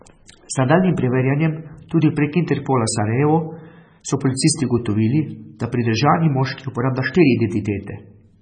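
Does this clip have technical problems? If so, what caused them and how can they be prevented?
Yes. Heavy MP3 compression likely causes the watery, swirly sound, smeared attacks and chirpy s sounds throughout, which points to a bitrate near 16 kbps. A spectrogram shows a flat ceiling at 9.3 kHz with flickering holes below it. Prevent it by encoding at a much higher bitrate or keeping a lossless copy.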